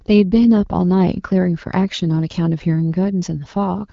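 No technical faults can be heard in this speech recording. It carries the band-limited sound of the AMR wideband (HD Voice) codec at 12.65 kbit/s, with only light coding damage and nothing above about 7.6 kHz.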